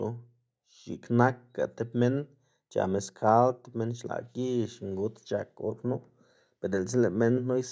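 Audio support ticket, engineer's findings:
No fault found: speech shows normal call microphone processing, with the expected low-bass roll-off from its high-pass filter and nothing above 8 kHz.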